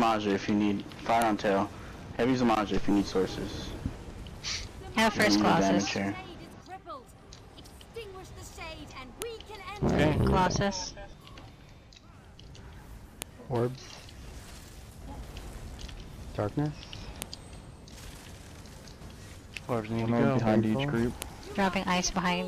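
Sharp, loud clicks at 1.22, 5.22, 9.22, 13.22, 17.22 and 21.22 s are a file header played as audio. Header bytes at each 4 s piece's start play as samples, unlike signal-dependent clicks.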